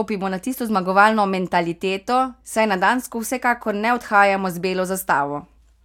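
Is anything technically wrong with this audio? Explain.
No, nothing technically wrong can be heard in this speech recording. There is no fault to explain anywhere in the clip.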